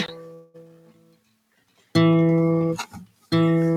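A call audio freeze runs from 0.33 s to 0.70 s. The sound stalls and is carried on as a fading buzz for roughly 0.2 s before the audio resumes exactly where it broke off, so nothing is lost but everything after is pushed about 206 ms later. The likely cause is packets held up in transit, leaving the receiver's jitter buffer empty so it stretched the last sound until delivery restarted.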